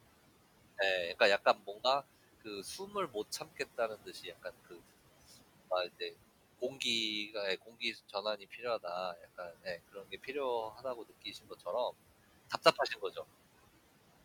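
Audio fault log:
Throughout, noise suppressor artifacts: the room noise, sitting about 17 dB below the speech, is pulled down by about 17 dB between phrases and rises back under them. Unlike a plain noisy room, the background pumps in step with the speech.
0.78–1.82 s, 2.4–11.67 s and 12.5–13.17 s, speech cut by the noise suppressor: soft consonants and word endings are treated as noise and dipped by up to about 14, 16 and 9 dB respectively, around a fifth of a second, two seconds and 0.15 s in total. The affected sounds turn faint along with the background.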